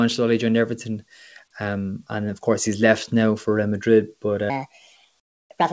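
A speech recording whose last stretch, from 4.50 s to the end at 5.72 s, suddenly turns high and rushed. It runs 1.37 times too fast and sits roughly five semitones sharp, with pitch and tempo jumping together rather than the talker changing delivery. That is a section at the wrong speed, likely from the audio being played or resampled against the wrong clock for that part. Inside that fast section, from 5.20 to 5.50 s, the real background drops out for 300 ms and is replaced by a flat, characterless hiss about 18 dB quieter than the room sound around it, with the background sitting about 57 dB below the loudest speech. This is comfort noise in place of the background, likely from a call sender pausing transmission when its voice detector heard no speech and the receiver filling the gap with synthetic noise. The band-limited sound, with nothing above 8 kHz, is consistent with a G.722 call path.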